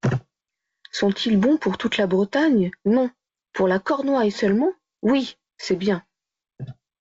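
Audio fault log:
No faults heard anywhere in this speech recording.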